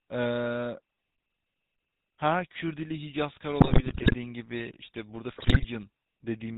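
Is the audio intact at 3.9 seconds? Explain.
No, 3.9 s sits inside a burst of GSM bit errors from 3.6 to 4.15 s, where corrupted filter, pitch and gain values make the speech squawk, pop and gargle frame by frame. Underneath, the GSM full-rate codec is plainly audible too: a buzzy, gravelly roughness from pulse-driven excitation, with nothing above 4 kHz.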